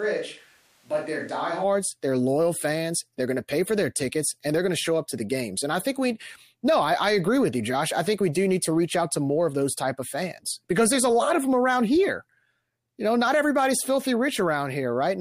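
The close microphone's feed has likely dropped out, leaving a switch to a distant microphone already under way when the speech begins and lasting until 1.63 s. The voice sounds roomy, hollow and thin in the bass, about 5 dB quieter, with audible room noise, before snapping back to close pickup.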